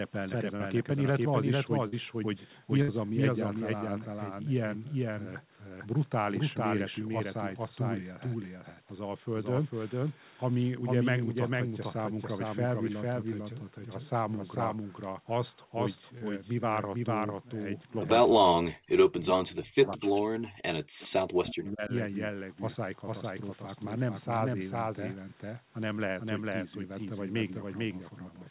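A doubled audio track runs throughout the speech: a second full-band copy trails about half a second behind at roughly equal level, likely from a slower capture path picking the sound up again.

Short concealed packet loss occurs at 0.56 to 0.62 s and 1.88 to 1.94 s. Each gap of about 40 ms was filled by extending the preceding sound, leaving a brief smear.

A burst of packet loss at 2.82 to 2.90 s drops about 60 ms. The last sound is stretched and faded, then the audio resumes further on with that stretch missing.

Another short concealed packet loss, at 16.18 to 16.23 s, covers about 27 ms, losing about 20 ms, with a brief patched wobble.

Speech is suppressed in double talk from 18.27 to 21.92 s, likely because the echo canceller could not separate the talker from the far side. The level dips in pieces over about 3 s, at its deepest to near silence.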